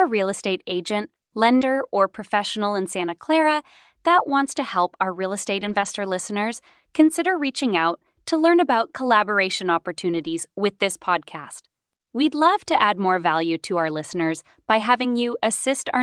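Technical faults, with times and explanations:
0.39, 1.61–1.63, 5.61–5.87 (after "help our real estate"), 10.13–10.35 (before "with this podcast"), 12.71–12.73, 14.11–14.17 (after "more value to our"), lost packet rebuilt from error correction: packets failed to arrive, but the following packet carried a low-bitrate backup copy that the decoder played instead. There is no gap, but the audio turns briefly rougher and noisier. The rebuilt stretches last 20 ms, 20 ms, 140 ms, 120 ms, 20 ms and 40 ms, which points to a single lost 20 ms packet or bursts of consecutive ones.
1.57–1.63, short concealed packet loss: about 40 ms of audio missed its playout deadline, and the receiver filled roughly 36 ms by extending the preceding sound before blending back. This causes a brief smear or wobble, and the end of the patch overlaps the rebuilt frame at 1.61.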